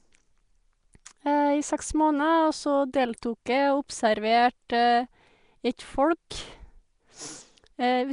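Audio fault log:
throughout, Nellymoser compression: the speech carries a rough, hissy halo and a smeared, underwater feel, with nothing above 10.6 kHz. It's likely the old Flash Nellymoser Asao codec, with the damage plainly audible at a rate that fits around 44 kbps, starving weak bands and filling them with noise.
1.05 s, pre-echo: a brief hiss of about 10 ms creeps in just ahead of a sharp attack, softening its edge. The codec spreads noise across the whole block, so noise meant to hide the loud onset spills into the quiet moment before it.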